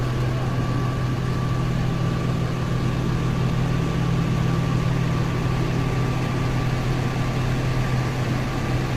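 Everyday sound, with heavy low-delay AAC compression damage throughout. The audio is rough and grainy, with a noisy fill smearing between tonal components and nothing above 18.1 kHz. This is likely AAC-ELD, the low-delay AAC used for video calls. Its very short frames give poor frequency resolution, so at a starved rate, one that points to around 24 kbps, detail between partials becomes coded noise and the top band is thinned.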